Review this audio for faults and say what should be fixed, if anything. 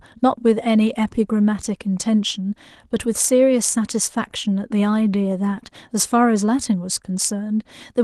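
Nothing here needs fixing.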